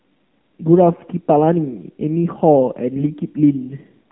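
Throughout, the speech passes through the AMR narrowband mobile codec at a low rate, which fits about 7.4 kbps. Nothing above 3.4 kHz survives, and the voice sounds plainly buzzy and synthetic. From 2.96 to 3.05 s, AMR bit errors flip some of the less protected bits in about three 20 ms frames, roughly 7 percent of them. The voice keeps its pitch and level but briefly turns hoarse and gargly.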